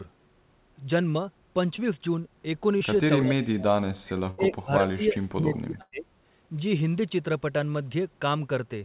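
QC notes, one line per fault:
1.76–1.80 and 2.78–2.82: short concealed packet loss. About 20 ms went missing each time and got patched by stretching the previous sound, so you hear a quick smear.
3.20–3.64 and 4.18–6.07: speech suppressed in double talk. The talker dips by about 35 dB, then about 30 dB, likely the echo canceller ducking while both sides overlap.
4.30–4.40 and 5.82–5.94: burst of packet loss. About 80 ms, then 100 ms, drop out. The gap is filled with a fading held sound, with a brief silence in the second, before audio resumes further along.
5.55–5.59: echo leak. A faint scrap of the voice returns 359 ms late, about 25 dB down, likely the far loudspeaker bleeding past the echo canceller.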